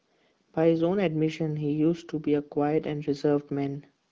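Nothing goes wrong here; the speech simply comes through the AMR wideband (HD Voice) codec at 12.65 kbit/s, a rate where that codec keeps speech clear and leaves only a light trace of its coding on the sound.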